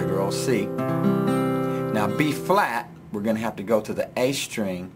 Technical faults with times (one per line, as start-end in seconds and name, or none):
none